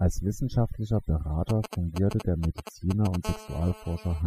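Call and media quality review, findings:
Overdone noise removal, throughout: background dropped and broken up into twinkling specks. Denoiser set too strong, cutting individual bands near its noise estimate, taking quiet speech detail with them. Spectrogram: isolated flickering time-frequency dots, ragged holes in speech harmonics.

GSM signalling bursts, 1.49 to 3.16 s: galloping dit-dit-dit ticks and short raspy buzzes, strong, close to speech level. Nearby 2G phone signalling, its grouped radio bursts rectified by the audio circuit. Waveform: clustered spike trains; spectrogram: intermittent vertical comb at 217 Hz harmonics.

GSM phone buzz, 3.25 to 4.22 s: continuous hard, raspy buzz at 217 Hz, about 13 dB below the speech, unrelated to it. Nearby 2G phone in a call, transmitting 217 bursts per second, pulses rectified into the audio path. Spectrogram: steady horizontal harmonic stack from 217 Hz upward.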